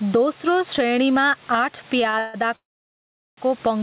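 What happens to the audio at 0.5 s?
At 0.5 s loud and soft parts sit closer in level than they should, with the level swinging by around 15 dB. That is gain pumping, running through the whole clip. The likely cause is microphone gain set far too high, so a fast limiter keeps clamping down on speech peaks and releasing in the gaps, squashing the dynamics.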